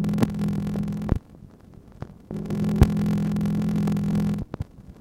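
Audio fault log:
Throughout, block size mismatch (padded): zero gaps end each block, which fits a 1024-sample read. They buzz at 43.1 Hz. Sound runs at 0.861 speed, pitch near normal.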